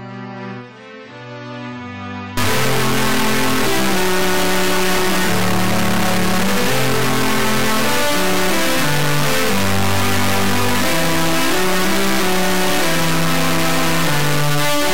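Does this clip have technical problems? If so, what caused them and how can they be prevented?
Yes. From 2.37 s to the end, an integer read as float fault: 32-bit integer samples are interpreted as 32-bit float, so output slams between silence and the clipping limit as a harsh square-wave buzz. Unlike ordinary overload distortion, it vanishes entirely in very quiet passages. Prevention: declare and check the sample format consistently between writer and reader.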